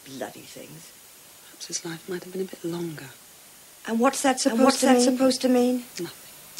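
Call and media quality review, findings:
Doubled audio track from 4.45 s to end. Full-band copy trails the original by roughly 0.7 s at about the same level. Dry, no decay. Starts abruptly. Likely a second, slower capture path mixed back in.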